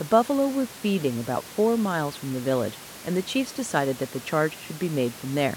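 Nothing technically wrong can be heard in the speech recording; the faint room noise sitting about 21 dB beneath the speech belongs to the space where it was recorded, not to the system.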